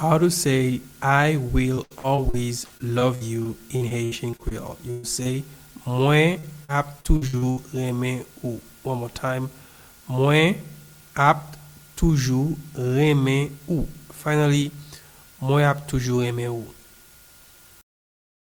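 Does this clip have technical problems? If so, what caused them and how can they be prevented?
Yes, the clip has several packet-loss faults.

Repeated packet loss (robotic sound) appears twice, from 1.75 to 4.53 s and from 6.33 to 7.59 s. In each stretch the receiver keeps losing audio in short runs, with the longest holes at 74 ms and 62 ms. Each gap is filled by extending the previous sound, so concealment covers about 19% of the first stretch and 27% of the second. The result is choppy audio with fragments missing. Preventing it means improving the network path by prioritising real-time traffic with QoS and avoiding congested Wi-Fi, and by using a codec with in-band forward error correction.

A burst of packet loss occurs from 4.91 to 5.05 s. About 120 ms of audio in a row never arrived in time to be played. The receiver continued the last sound across the hole, fading it down without going silent, so the listener hears a held buzz or hiss. 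Playback then resumes later in the audio, and the missing part is gone. A larger adaptive jitter buffer together with redundancy or FEC would let late or lost packets be recovered rather than concealed.

Short concealed packet loss occurs at 5.23 to 5.27 s. Roughly 20 ms failed to reach the decoder in time and was synthesised from the preceding sound, then blended back into the real signal. It comes across as a brief smear or wobble, and a very short sound in that spot could disappear. Stable bandwidth and a codec with FEC enabled would keep single-packet losses like this from reaching the output.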